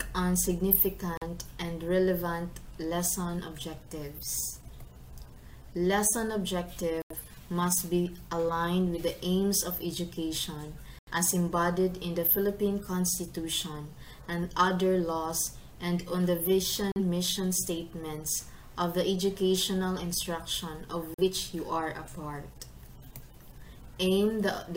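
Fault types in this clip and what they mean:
digital broadcast dropout: the receiver mutes when frames fail, leaving five gaps of about 0.09 to 0.14 s, visible as blank vertical stripes in the spectrogram and flattened stretches in the waveform.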